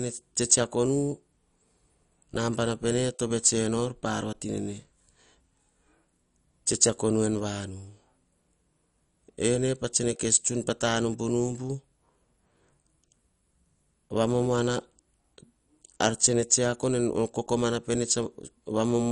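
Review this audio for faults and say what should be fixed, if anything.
Throughout the speech the sound is dull and muffled, with a gurgling, granular roughness that shifts as the voice moves, and nothing survives above 11.3 kHz. This is likely MP2 compression at a low bitrate, which fits roughly 48 kbps. Layer II divides the spectrum into 32 sub-bands and, short of bits, shuts off the upper ones and quantises the rest coarsely, so bands flicker and the texture turns grainy. To prevent it, encode at a higher bitrate or use a more efficient codec.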